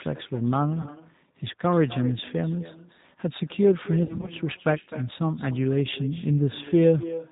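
Speech recorded over a phone call, with three faults. An echo with no canceller runs throughout. A quieter, thinner copy returns roughly 300 ms later, about 16 dB below the voice. The G.729 codec at 8 kbit/s removes everything above 4 kHz. It makes the voice plainly rough and synthetic. VoIP packet loss concealed by the speech codec occurs at 0.82 to 0.91 s and 4.03 to 4.31 s. The decoder fills the gaps with a fading buzz or coloured noise, and the voice stays weak afterward.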